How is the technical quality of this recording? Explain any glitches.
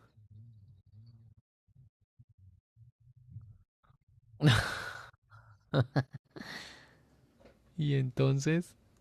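The recording has one glitch: a section at the wrong speed from 5.93 to 7.37 s. It plays 1.14 times fast, likely from a clock mismatch, so pitch jumps about two semitones along with tempo, unlike a pure pitch shift.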